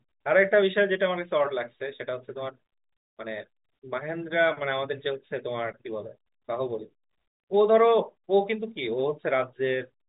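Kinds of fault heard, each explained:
There are no kinds of fault heard in this speech.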